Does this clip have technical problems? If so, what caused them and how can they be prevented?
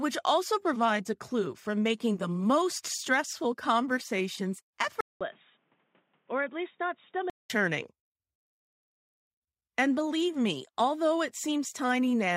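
Yes. From 5.01 to 7.50 s the speech turns dull and boxy, with nothing above 3.8 kHz, drops somewhat in level, and picks up new background noise roughly 40 dB below the signal. A 200 ms silence marks the switch. This is likely the input switched to a poorer device, such as another microphone or a headset's call profile, whose narrow band and own noise replace the original path until it returns. Locking the recording input to one fixed device prevents it.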